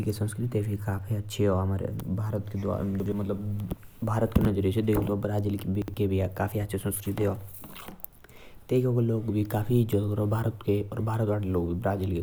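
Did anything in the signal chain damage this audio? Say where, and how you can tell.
Yes. The speech has chunks out of order at 3.0 to 3.12 s and again at 5.82 to 5.94 s. Each spot is a brief jumbled stutter, about 0.12 s long, which fits two 60 ms chunks trading places. One chunk arrived or was written one slot late and plays after its successor. Nothing is missing, but the swap leaves three hard joins per event. This points to the buffer or network reordering stage.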